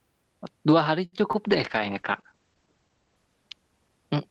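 A late packet left the jitter buffer empty from 1.05 to 1.14 s, a short stall from a late packet. About 70 ms is held and stretched, nothing lost, so the sound drags with a slight buzz. Two packets then failed to arrive in time, each a short concealed packet loss, at 1.18 to 1.21 s and 1.32 to 1.35 s. Around 20 ms went missing each time, and the filled-in audio gives a brief smear or wobble. From 1.45 s to the end, a call bitrate drop takes the Opus stream from 32 to 11 kbps for 1.22 s at its lowest, with bandwidth narrowing from 12 kHz to 8 kHz, so the sound turns rough and muffled.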